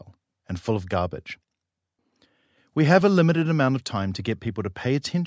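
Speech recording, no technical faults detected.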